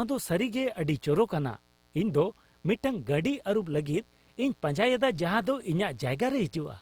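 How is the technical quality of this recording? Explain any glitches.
The recording has two technical problems running through the whole of the speech: a mains buzz underneath it and audible coding damage.

Mains buzz: A dimmer, rectifier or unshielded cable has let switching spikes from the 60 Hz supply into the signal path, two per cycle. Those sharp pulses carry a ladder of 60 Hz harmonics reaching well into the kilohertz range. The result is a constant raspy buzz, sitting roughly 35 dB below the speech, present from start to finish.

Opus compression: The encoder, likely Opus in its CELT music mode, has been starved of bits, which fits a low rate of around 24 kbps. Rather than leaving gaps, it refills sparse bands with copied lower bands or noise, so the speech comes out grainy and rough. The bandwidth stays wide, with content reaching about 20 kHz, so it is not muffled.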